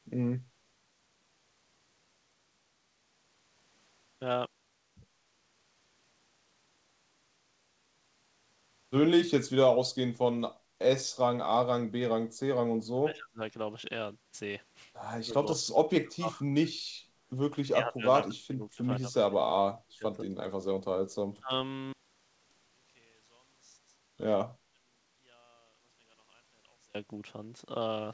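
Speech suppressed in double talk first appears at 12.67 to 13.4 s and again at 15.23 to 16.76 s: the speech sinks by up to roughly 35 dB, most likely because an echo canceller could not separate this talker from simultaneous far-end audio and attenuated both.

Background gated by the echo canceller follows at 17.02 to 17.1 s. The room sound dips by about 8 dB for a brief moment while loudspeaker playback triggers hard microphone attenuation, then returns.

The double-talk suppression comes back at 17.53 to 20.3 s, with around two seconds of sunken speech, and again briefly at 21.36 to 21.52 s.

A second background gate at 24.57 to 24.7 s pulls the room sound down by about 11 dB.

Throughout, nothing sounds above 8 kHz, consistent with a wideband call codec.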